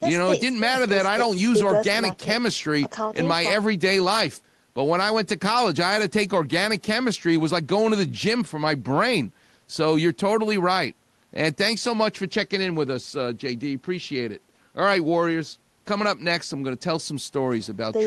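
No faults in the speech; the call path through the codec and jitter buffer shows as the expected band-limiting, with content ending around 12 kHz, consistent with Opus at a low speech bitrate.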